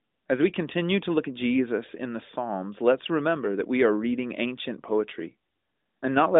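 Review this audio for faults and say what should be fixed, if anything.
Nothing needs fixing: the speech has the narrowband mobile-line character of AMR-NB, with nothing above 3.8 kHz, which fits a 12.2 kbps mode, and no faults are present.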